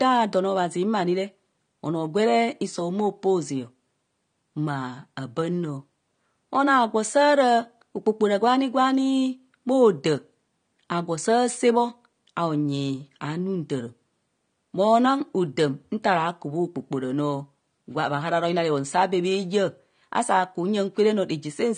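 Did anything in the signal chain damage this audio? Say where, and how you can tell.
Yes, at the codec stage, and it runs through the whole speech clip. Nothing reaches above 9.7 kHz, so the top end is shaved off and everything sounds dull, and the damage is plainly audible as smeared, fizzy sibilants. That's likely AAC compression, probably AAC-LC at a low rate that fits something around 32 kbps. It's starving the upper bands of bits, dropping the cut-off and swirling what's left of the high-frequency detail.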